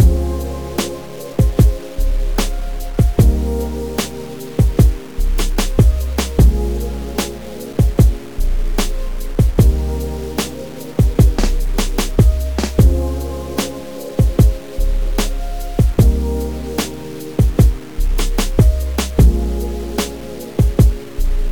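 Low bit depth without dither runs through the whole clip. The grainy distortion tracks the sound, and quiet passages turn gritty or sputter. The likely cause is truncation to about 6 bits with no dither, leaving error only around 25 dB below the signal.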